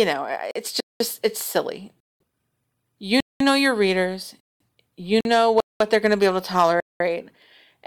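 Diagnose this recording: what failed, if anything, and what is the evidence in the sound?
Gap between chunks is the big one, at the playback or storage stage. 200 ms holes land at 0.80, 2.00, 3.20, 4.40, 5.60 and 6.80 s, right before "it's silly" and after "know your readers". Each 1-second chunk plays, then silence gets inserted before the next.

Two shorter dropouts sit at 0.51 s (about 43 ms) and 5.21 s (about 46 ms). The sound cuts out and then carries on. That's likely a Bluetooth stall on the wireless link, where the headphone buffer empties while resent packets catch up.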